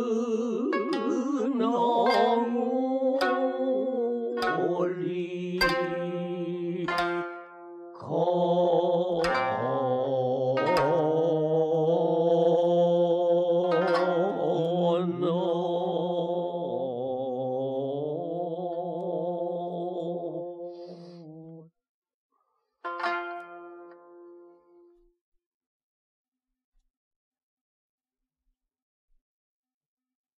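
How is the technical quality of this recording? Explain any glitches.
No glitches or technical faults are audible here.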